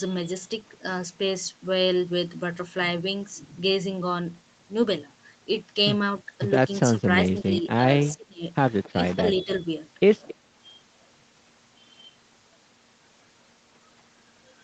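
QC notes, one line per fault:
6.91–7.69 s, 8.15–8.44 s and 8.89–9.63 s, speech suppressed in double talk. The speech dips in level. The deepest dips are about 15 dB in the first and third spans and about 25 dB in the second. Each span loses a few hundred milliseconds in total. The likely cause is an echo canceller that cannot tell the near talker from loudspeaker echo, so it turns both down.
8.00–8.04 s, 8.83–8.90 s, 9.37–9.57 s and 10.28–10.34 s, echo leak. A faint, delayed copy of the speech comes back 271 ms after the original. It sits about 20 to 25 dB below the speech. It arrives as brief scraps, and only the 9.37 s one lasts longer. The likely cause is an echo canceller on a loudspeaker end that does not fully remove what its microphone picks up, so the residue is sent back.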